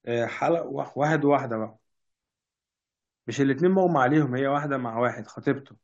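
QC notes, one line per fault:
Nothing to flag on this speech clip; it's all good as far as faults go.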